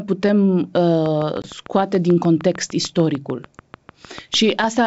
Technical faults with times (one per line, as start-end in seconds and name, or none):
1.06-4.80 train of clicks
1.42-1.51 packet loss on an ADPCM call